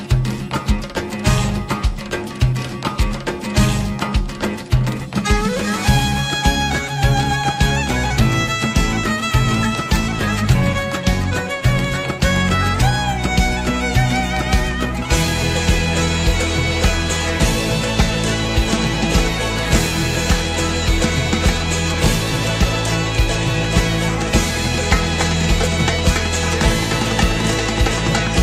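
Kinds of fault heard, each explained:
No technical faults can be heard anywhere in the recording, and the signal holds steady without any audible disturbance.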